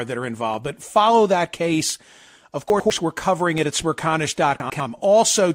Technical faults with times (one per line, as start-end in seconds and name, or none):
2.70-2.90 chunks out of order
4.60-4.80 chunks out of order